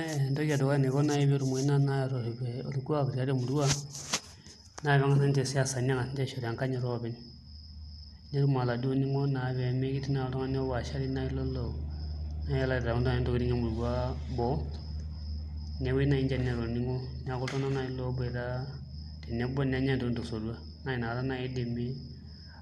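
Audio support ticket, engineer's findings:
Likely MP2 compression, consistent with around 80 kbps: starved upper sub-bands cut, nothing above 12.2 kHz. Speech dull, gurgly and granular throughout.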